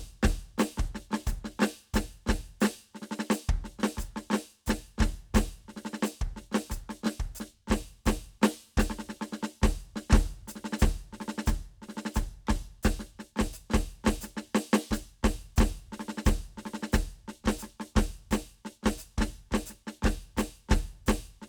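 No technical faults turn up at any point in the music, so there is nothing to describe in time order.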